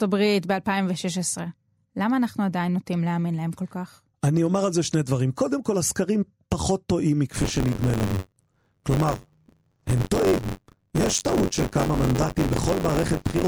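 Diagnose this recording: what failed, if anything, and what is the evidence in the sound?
Buffer tearing at the driver or buffer stage, from 7.32 s to the end. The speech takes on a robotic rattle near 94 Hz, which fits a 512-sample buffer. Writer and reader have slipped, so about a fifth of each period replays audio roughly 30 ms old.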